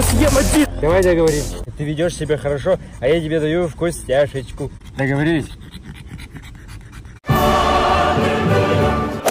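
Hard clipping runs through the whole clip. The signal was pushed about 6 dB past what one stage could pass, so the highest peaks were sliced flat. Only a small share of the waveform hits that ceiling, around two percent. Those squared-off tops add harmonics high in the spectrum. The result is a brief, gritty crackle on each loud peak rather than a constant fuzz.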